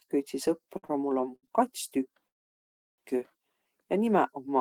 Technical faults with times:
0.77-0.91 short stall from a late packet
1.36-1.45 short stall from a late packet
2.28-3.00 call audio freeze

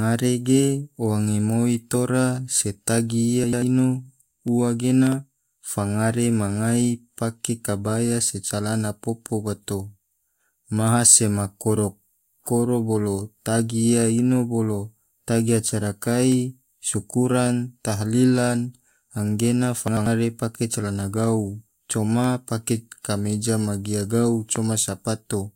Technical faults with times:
3.44-3.62 chunks out of order
5.07-5.14 loud pop
19.88-20.06 chunks out of order
24.56-24.58 loud pop

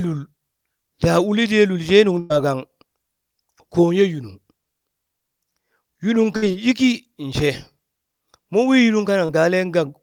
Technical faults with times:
2.19-2.33 burst of packet loss
6.36-6.52 burst of packet loss
9.25-9.31 short concealed packet loss

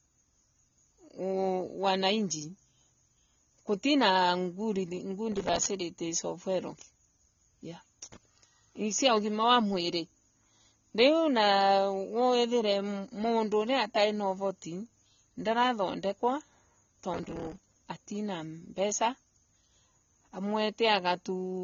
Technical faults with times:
0.00-21.63 AAC compression
5.32-5.69 processor overload crackle
17.14-17.77 processor overload crackle

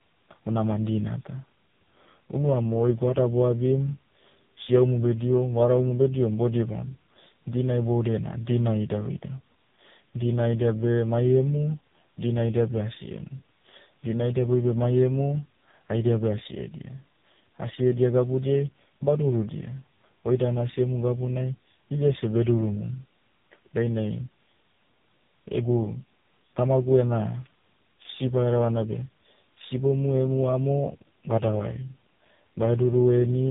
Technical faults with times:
0.00-33.50 tandem speech coding

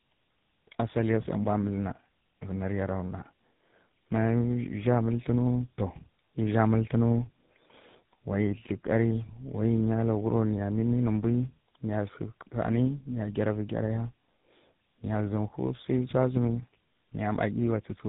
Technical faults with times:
0.00-18.08 tandem speech coding

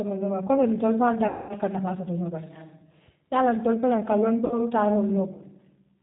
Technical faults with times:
0.00-6.03 G.729 codec
1.28-1.54 VoIP packet loss concealed by the speech codec
4.45-4.60 VoIP packet loss concealed by the speech codec

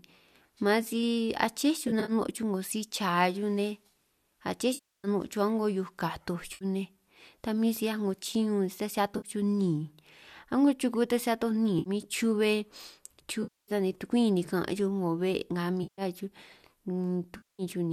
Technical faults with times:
1.88-2.12 AAC frame loss with concealment
4.74-5.08 AAC frame loss with concealment
6.54-6.65 AAC frame loss with concealment
9.16-9.28 AAC frame loss with concealment
11.79-11.90 AAC frame loss with concealment
13.43-13.72 AAC frame loss with concealment
15.82-16.02 AAC frame loss with concealment
17.36-17.63 AAC frame loss with concealment

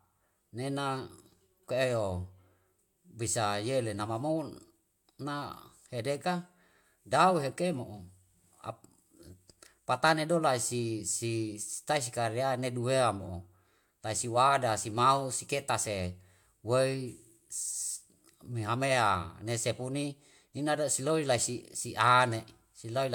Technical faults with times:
none

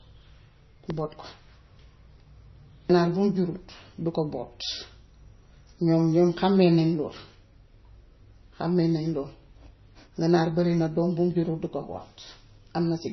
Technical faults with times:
0.00-13.12 MP3 compression

